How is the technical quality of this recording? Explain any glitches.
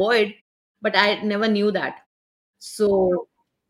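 No glitches can be heard in this speech recording. In the pauses the output fades to silence and the background drops away, then it returns in time for the next sound without losing any of the speech.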